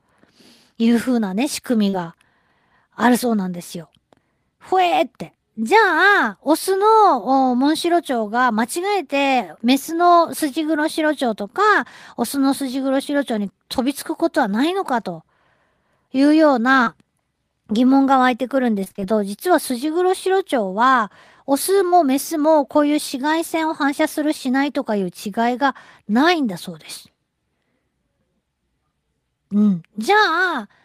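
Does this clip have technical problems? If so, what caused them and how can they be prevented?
Yes. In the short concealed packet loss at 1.89 to 1.96 s, 16.83 to 16.89 s and 21.88 to 21.94 s, the speech briefly smears or wobbles, as if a sliver were stretched over. Each time about 40 ms of audio never arrived in time, and the decoder covered 30 to 40 ms of the hole by extending the preceding sound before blending back. At 1.89 s this leaves the timing a few milliseconds late. A larger jitter buffer and forward error correction would prevent this.

From 18.84 to 19.04 s the sound turns choppy. This is repeated packet loss: five separate dropouts, the longest 26 ms, landed in quick succession. Each one was patched by continuing the last sound before the next arrived, so about half of this 0.2 s stretch is synthesized fill, about 100 ms in total. Sending audio with redundancy or error correction over a steadier connection would prevent these bursts.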